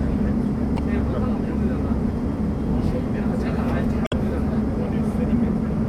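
At 0.75–0.79 s and 4.04–4.13 s, damaged data in the compressed stream garbles decoded frames into brief glitches, seen as broadband vertical smears and abrupt waveform breaks.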